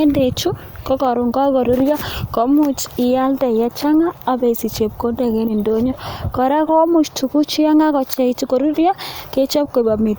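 No technical faults are audible anywhere in the speech recording.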